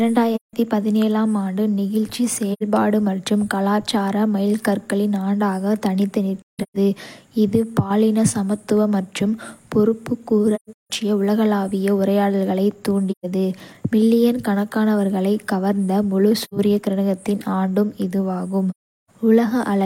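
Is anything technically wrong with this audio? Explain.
Yes. The speech has AAC frame loss with muting at 0.35–0.53, 2.53–2.62, 6.39–6.76, 10.55–10.90, 13.11–13.26, 16.41–16.53 and 18.70–19.10 s. Each lost frame had its spectrum zeroed by the decoder, so the overlapping windows fade the sound out and back in. The gaps run from about 85 ms to 384 ms. At 6.39 and 10.55 s several short holes cluster together, with the longest run around 150 ms.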